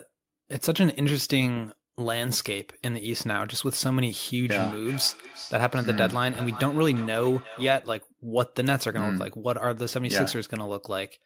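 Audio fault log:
4.46 to 7.94 s, feedback echo between two devices: the speech returns about every 0.4 s, each repeat thinner and more ringing, peaking about 14 dB below the voice. A second device replays this microphone's signal, which is captured again and escapes the canceller. A single room echo would instead blur rather than repeat at a steady interval.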